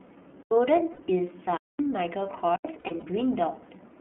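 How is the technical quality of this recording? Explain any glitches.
Technical quality is poor. The whole recording passes through an iLBC codec, and short drop-outs and concealed packet losses recur across it.

iLBC codec (throughout): The speech was coded by the iLBC narrowband VoIP codec. It codes each frame's excitation independently, and here the frame is 30 ms, which fits its 13.33 kbps mode. The line carries only about 150 Hz to 3.4 kHz, so everything above that is gone. The codec damage is plainly audible: the speech sounds muffled, slightly rough and synthetic.

Block of digital silence (0.43–0.51 s, 1.57–1.79 s, 2.56–2.65 s): In each case zeros were played instead of audio, most likely because the output buffer was not filled in time. The two 85 ms gaps match a 4096-sample block. The middle gap lasts about 221 ms. The sound drops abruptly to dead silence and returns with no fade.

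Lost iLBC frames (0.93–1.02 s, 2.79–3.04 s): Packets went missing, and the decoder filled the space by repeating the last pitch cycle mixed with noise. The first loss lasts 60 ms, consistent with two 30 ms frames. The second is a 150 ms scatter of losses spread over about 240 ms, with the longest run around 70 ms. Each loss sounds like a held, buzzy vowel, and the voice comes back right almost immediately afterwards.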